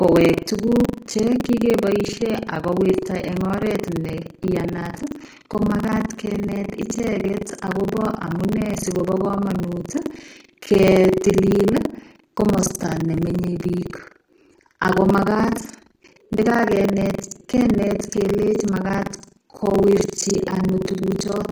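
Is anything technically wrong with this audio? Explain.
Yes. Throughout, the treble sounds likely rebuilt by HE-AAC compression, pointing to a low bitrate. S sounds turn gritty and metallic.

Buffer tearing also runs throughout. Writer and reader cross in each buffer, splicing in roughly a fifth of audio from about 100 ms earlier. This causes a 23.4 Hz robotic buzz, which fits a 2048-sample buffer.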